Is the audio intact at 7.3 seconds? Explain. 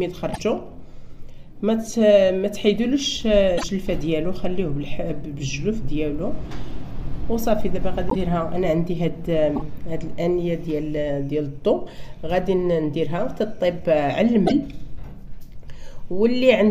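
Yes, at 7.3 seconds the audio is intact, with no dropout, click, distortion or other fault to be heard at that moment.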